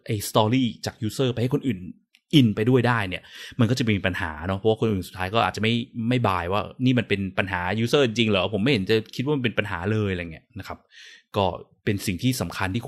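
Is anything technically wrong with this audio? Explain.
No, nothing technically wrong can be heard in this speech recording; the signal stays intact and steady throughout.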